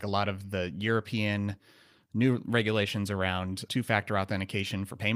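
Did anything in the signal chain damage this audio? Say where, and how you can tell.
No, nothing in the signal chain has damaged this speech recording. At no point in the clip does any stage from capture through to playback leave an audible mark on the sound.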